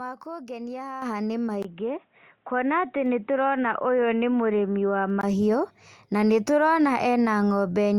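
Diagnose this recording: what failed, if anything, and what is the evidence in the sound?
Microphone volume stepped up at 1.02 s: call processing raised the input gain about 8 dB in one step, visible as a sudden jump in the waveform envelope of speech and background together.

Input switched to a poorer device, likely at the driver level: from 1.63 to 5.23 s speech turns dull, with a brief 20 ms gap at the switch. The spectrogram shows a narrower band, a faint new noise floor, and a nearly unchanged level.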